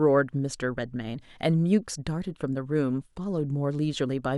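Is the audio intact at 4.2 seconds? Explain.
Yes, the speech at 4.2 seconds is intact, with no audible fault at that moment.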